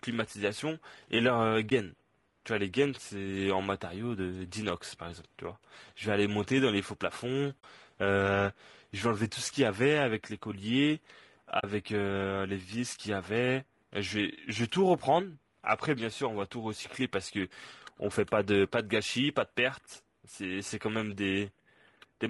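Low-delay AAC compression is plainly audible throughout this speech recording: the voice sounds rough and grainy, with noise filling the gaps between pitch harmonics and a thin, synthetic top band. The likely cause is AAC-ELD, whose short frames resolve harmonics poorly, at a rate that fits about 32 kbps. AAC frame loss with muting appears at 1.69–1.72 s, 7.60–7.64 s and 11.59–11.64 s. In each, the decoder zeroed the missing spectrum, and the overlapping windows fade the sound out and back in, leaving a brief dip for the single frame and soft-edged holes for the pairs. The first gap suggests one lost 20 ms frame, the later two suggest two frames each.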